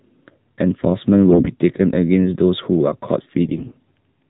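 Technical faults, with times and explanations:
Throughout: AMR narrowband mobile codec. The speech passed through the AMR-NB mobile codec, which resamples to 8 kHz and rebuilds the voice from a vocal-tract model excited by a handful of pulses per subframe. The thin, buzzy, synthetic quality fits one of its lower modes, around 7.4 kbps. Everything above 4 kHz is gone, so sibilants and breathiness are missing and the voice sounds boxed-in and telephone-like.
1.29–1.54 s and 3.45–3.91 s: AMR bit errors. In these two stretches the codec frames arrived with flipped bits in their weakly protected fields. The first burst is heavier, roughly one bit in ten; the second is longer and a little lighter. The frames still decoded, but with excitation pulses misplaced and fine gain and spectral values wrong. Pitch and loudness roughly hold, yet the voice turns hoarse, scratchy and gargly for those moments.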